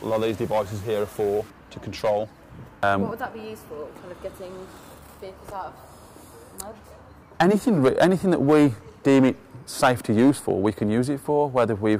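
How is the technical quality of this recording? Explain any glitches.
One glitch occurs at the very start. Low bit depth without dither, 0.0 to 1.5 s: the audio was likely rounded to very few levels, consistent with about 7 bits, with no dither. The rounding error follows the waveform, giving grainy, shifting distortion roughly 30 dB below the sound.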